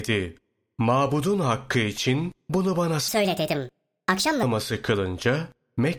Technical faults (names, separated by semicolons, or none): wrong sample rate